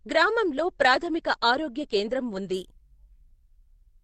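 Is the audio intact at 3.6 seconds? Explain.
Yes, the speech at 3.6 seconds plays through without any dropout, glitch or distortion.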